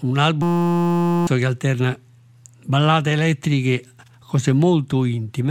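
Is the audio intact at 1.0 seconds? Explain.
No, at 1.0 s you're right in the middle of a system hang loop that runs from about 0.42 to 1.27 s. The driver or machine stalled while the sound hardware kept replaying the same tiny ring buffer, a 5.8 ms slice, which fits a 256-sample buffer. Looping that fast turns into a steady buzz at about 172 Hz instead of a stutter, and roughly a second of the real audio is simply gone.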